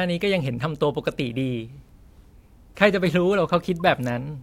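Speech, with a corrupt frame decoded at 3.80 s: one damaged compressed frame plays with faint energy misplaced at the wrong frequencies, not the silent gap of a dropped frame.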